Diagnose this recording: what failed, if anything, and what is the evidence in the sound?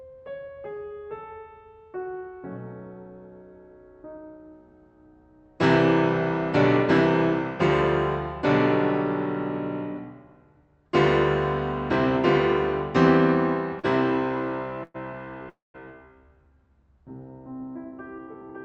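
Network and jitter buffer stage: a short stall from a late packet at 13.79 to 13.86 s. The music is held for about 41 ms with a slight buzz or dip, then resumes from the same point. A packet arrived late, the buffer ran dry, and the receiver stretched the last sound.

Two call audio freezes follow, at 14.84 to 14.96 s and 15.49 to 15.76 s. The first is a 108 ms fading buzz or hiss. The second lasts 250 ms and decays into about 180 ms of silence. The likely cause is packets delayed in transit, emptying the jitter buffer. Playback continues where it stopped, so nothing is lost, but gaps are added. The codec band limit near 8 kHz is also present.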